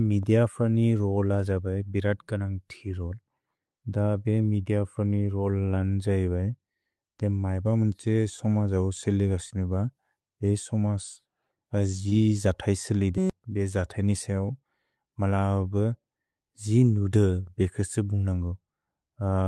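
At 12.09 to 12.13 s the speech briefly smears and wobbles, a short blur where the sound seems stretched rather than spoken. This is short concealed packet loss: about 20 ms of the call arrived too late, and the receiver filled the gap by extending the preceding sound before blending back into the real signal.

At 13.18 to 13.30 s a steady buzz at 188 Hz replaces the speech. This is a system hang loop: while the system stalled, the audio hardware kept replaying one 5.33 ms slice of its buffer, which fits a 256-sample buffer, and roughly a tenth of a second of audio was lost.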